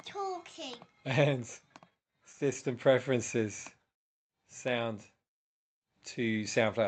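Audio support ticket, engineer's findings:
Scattered short gaps, 1.69 to 2.56 s. About five brief ticks and smears. Each lasts no more than about 15 ms, roughly 50 ms in total. Probable component: jitter buffer after lost or late packets. Receiver concealment extends the last sound over each hole. Opus call path, audio band-limited at 8 kHz.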